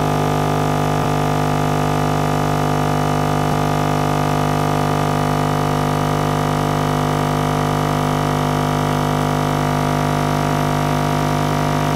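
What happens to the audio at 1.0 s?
From 1.03 to 1.05 s, Bluetooth LE Audio frames were lost, about 20 ms, which fits two 10 ms frames. The LC3 decoder filled the gap by repeating the last spectrum with randomised signs, so the sound briefly turns into a short noisy smear.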